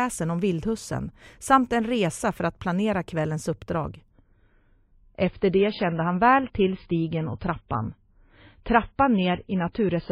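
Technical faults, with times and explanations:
4.11 s to end, adaptive stream at a lower bitrate: quality switches suddenly with no gap to a duller version with nothing above 5 kHz, consistent with a step down to a much lower MP3 bitrate. Unlike a plain low-pass filter, swirly codec artefacts also rise.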